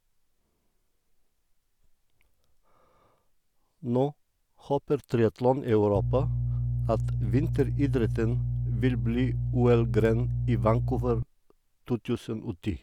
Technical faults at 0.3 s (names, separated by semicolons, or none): none